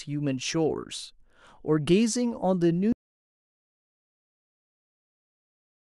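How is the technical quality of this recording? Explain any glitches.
The recording has one serious glitch. Audio dropout to silence from 2.93 s through to the end: the speech cuts off mid-flow and the remaining stretch is silent with no room tone, likely because the input was lost while the recorder kept writing silence, so nothing after that point survives.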